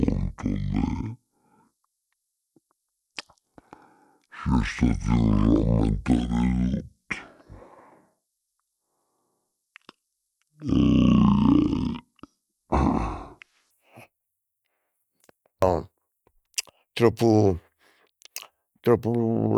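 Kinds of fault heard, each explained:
Section at the wrong speed: speech until 13.7 s plays at half speed, deep and slow, likely a clock mismatch; spectrogram harmonics sit around ten semitones lower, waveform stretched.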